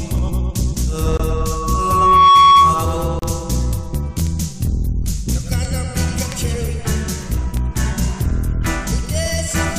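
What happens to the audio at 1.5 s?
A microphone is picking up the loudspeaker it feeds, and at 1.1 kHz the loop gain tops one. From 1.32 to 3.05 s, that loudspeaker feedback squeal swells over about a second into a steady whistle roughly 10 dB above the sound.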